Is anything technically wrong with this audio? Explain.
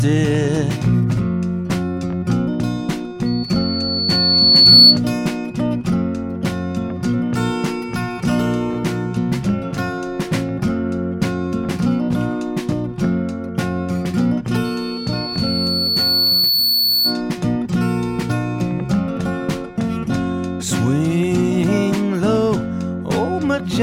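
Yes. Loudspeaker feedback squeal occurs from 3.26 to 5.00 s and from 14.64 to 17.22 s. The microphone hears its own loudspeaker, and loop gain exceeds unity at 4.4 kHz. A pure tone swells over one to two seconds, well above the audio the first time and slightly above it the second.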